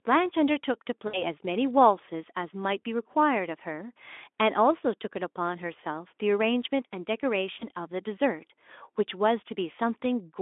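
Brief buzzy, fading smears at 1.07–1.23 s, 2.85 s and 7.60–7.65 s are VoIP packet loss concealed by the speech codec: the Speex decoder extends its last pitch and filter across the missing frames, fitting roughly three lost 20 ms frames at the first gap.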